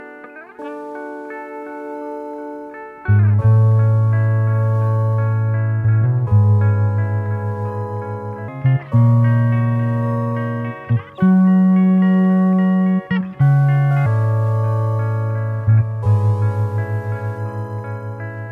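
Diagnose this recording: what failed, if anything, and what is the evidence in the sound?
From 8.48 s to 14.06 s there's a section at the wrong speed: the sound jumps to about 1.27 times its proper rate and rises roughly four semitones, with pitch and tempo shifting together at the boundaries and then dropping back just as abruptly. That tight coupling rules out a pitch effect. The likely culprit is the editing or playback stage, where that stretch got resampled or clocked against the wrong rate, so it was read out faster than it was captured.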